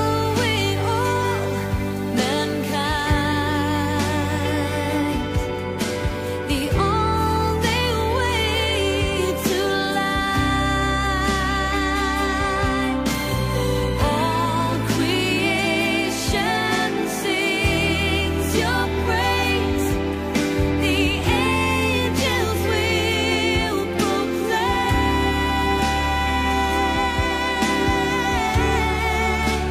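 From the start to about 4.98 s there's low bit depth with dither: the hiss level fits a 7-bit signal, dithered before rounding, so the error becomes a steady, even hiss with no distortion, sitting roughly 25 dB below the signal.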